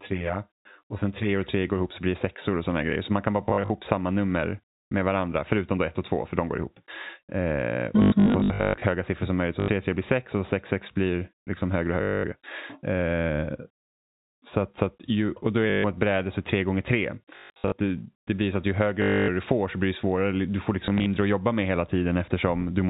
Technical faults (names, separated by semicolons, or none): channel delay (comb filtering); packet loss with last packet repeated